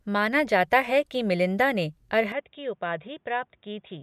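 At 2.32 s the input likely switched to a poorer device; the speech turns dull, cut above 3.7 kHz, about 10 dB quieter, with faint new noise.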